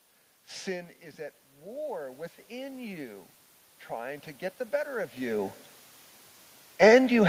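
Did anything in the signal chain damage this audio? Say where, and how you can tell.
Yes. From 0.64 to 2.88 s the voice and the room noise swell together by about 7 dB. This is automatic gain rising in call processing: the input fell about 16 dB when the talker moved near half a second, and the gain control slowly turned itself up to compensate.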